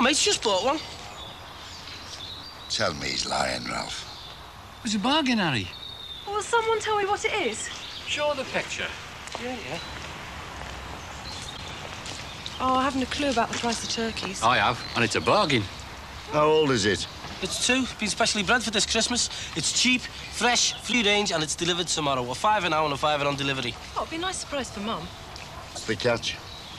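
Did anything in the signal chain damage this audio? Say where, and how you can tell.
Yes. A likely broken MP3 bit reservoir at the codec stage causes short glitches at 11.56–11.59 s, 20.91–20.94 s and 25.75–25.78 s. Each lasts about one 26.1 ms frame, and the sound jumps ahead through it. Frames have been cut out of the stream, so the frame after each gap reaches back into the reservoir for data it stored earlier and decodes bytes that belong to a different frame.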